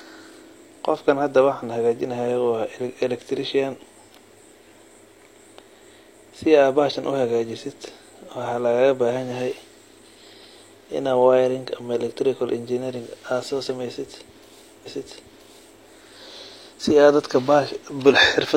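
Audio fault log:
14.82–15.79 s, stream segment repeated: just under a second of the speech plays a second time, with a small blip where playback jumps back. The player fetched or queued the same stretch twice, adding about 0.98 s to the timeline.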